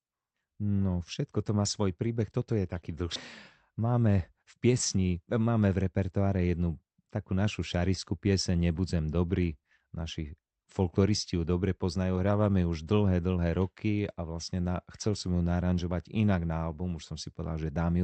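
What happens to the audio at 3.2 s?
At 3.15 s the speech hits a skip ahead: roughly one and a half seconds of audio is missing, and playback jumps straight from one side of the gap to the other with no silence or fill. A block of audio was discarded, either in transit or by an overflowing jitter buffer that already held later packets. Dropping it cut the playback delay by about the same amount, so the speech resumes mid-flow with an abrupt join.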